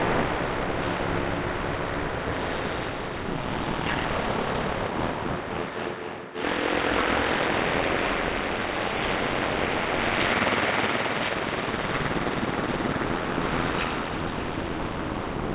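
No technical faults can be heard in these sounds, which come through a call path whose band stops at about 4 kHz, which fits G.711 A-law coding at 64 kbps.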